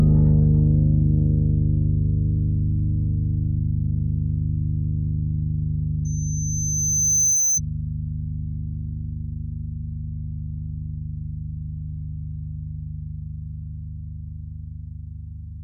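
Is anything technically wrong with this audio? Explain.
Yes, there is loudspeaker feedback squeal from 6.05 to 7.60 s. A microphone was picking up the loudspeaker it was feeding, and at one frequency the round trip through that loop had a gain above one, so the tone kept feeding itself. In this clip it is a pure tone at about 6.1 kHz. It swells over roughly a second and a half until it sits a few decibels above the rest of the sound, then stops.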